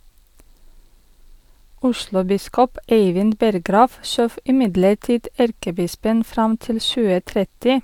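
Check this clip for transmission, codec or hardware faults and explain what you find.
No faults found; the speech holds steady throughout with nothing that calls for attention.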